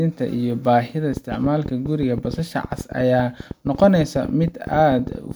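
Speech, with a train of clicks from 1.13 s to 5.32 s: around fifty similar pulses at an irregular pace of about 10.8 per second, peaking roughly 5 dB above the speech and audible through pauses. Interference from nearby equipment or a faulty connection or power supply is the likely cause.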